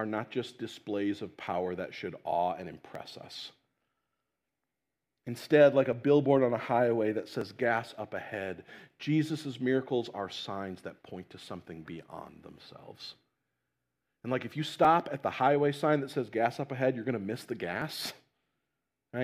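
Two independent clocks likely drift apart by about one part in a thousand, so clock drift buffer slips drop or repeat short sample blocks, clicking every 1.49 s from 1.47 to 17.82 s, starting after "not just displays of".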